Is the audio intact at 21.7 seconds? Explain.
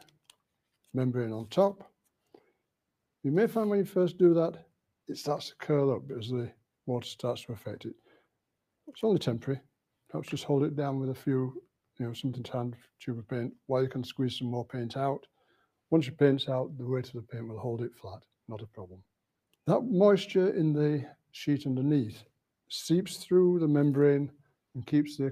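Yes, at 21.7 seconds the sound plays through cleanly, with no dropout, click, distortion or other fault to be heard at that moment.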